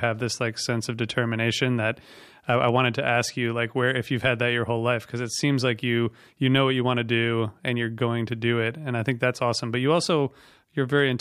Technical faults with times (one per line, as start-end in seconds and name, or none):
0.04 hard clipping
2.49-3.20 hard clipping